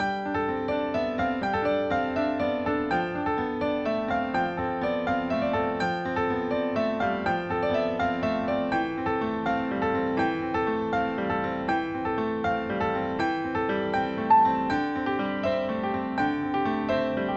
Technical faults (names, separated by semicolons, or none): none